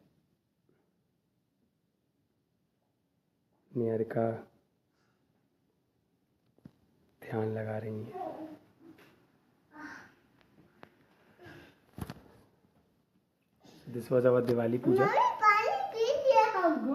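No technical faults can be heard in this audio: the signal shows no dropouts, clipping, glitches or other defects at any point.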